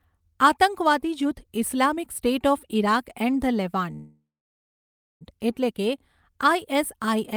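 At 3.93 s the speech stops and a call audio freeze begins. It lasts until 5.23 s. The last sound carries on briefly as a fading buzz or hiss, then drops to near silence for about 0.96 s. The likely cause is packets held up in transit, so the jitter buffer ran empty. When they arrive, the speech resumes exactly where it halted. Nothing is lost. About 1.27 s of gap is inserted, and everything after it plays that much later.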